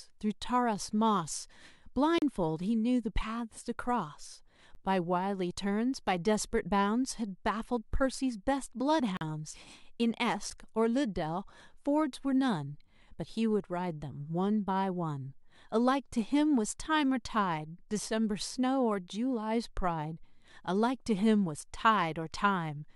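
Speech cut by sudden dropouts: short holes at 2.18–2.22 s (about 36 ms) and 9.17–9.21 s (40 ms), and clicks at 4.75 s and 10.50 s (10 ms each). Each is a block of digital silence, samples zeroed likely when the output buffer went unfilled, with hard edges.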